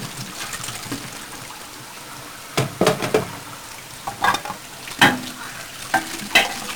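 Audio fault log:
Throughout: 1-bit DFPWM compression. Heavy broadband fuzz and crackle bury the treble in hiss, as each one-bit sample nudges an adaptive level, which fits roughly 48 kbps. A spectrogram shows a raised noise floor across all frequencies.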